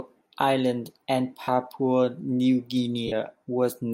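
At 1.43 to 1.48 s and again at 3.07 to 3.13 s, lost LE Audio frames leave about 45 ms gaps, which fits six 7.5 ms frames. The decoder fills each gap by repeating the last spectrum with scrambled phase, so the speech blurs into a brief noisy smear rather than dropping to silence or clicking like a plain dropout. The light lossy compression stays in the background.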